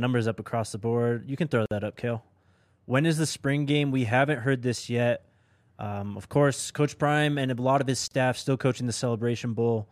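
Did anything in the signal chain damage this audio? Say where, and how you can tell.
Yes. At the codec stage, separately encoded pieces were joined without trimming each run's start delay and final-frame padding, leaving a gap at a join of encoded pieces. The speech cuts to silence at 1.66–1.71 s (52 ms) and 8.08–8.11 s (34 ms), with smeared edges, then resumes where it stopped.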